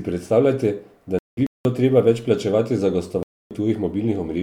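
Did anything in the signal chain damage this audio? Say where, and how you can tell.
Yes, the damage is at the codec stage, in decoding, and it is corrupt frame muting. The speech drops to silence at 1.19 s, just after "predstavljate da", and returns at 1.65 s on "treba več plačevati za". A second hole runs from 3.23 to 3.51 s, after "treba več plačevati za". Both gaps start abruptly, which points to whole frames being discarded. Their lengths, about 0.47 s and 0.28 s, fit several consecutive frames. The decoder rejected them as corrupted, and the player muted them while keeping time.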